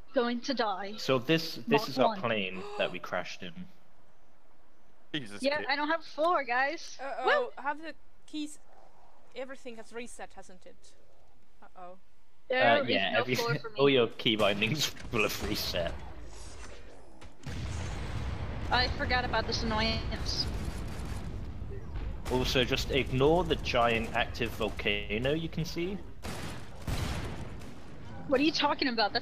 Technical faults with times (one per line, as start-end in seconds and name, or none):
none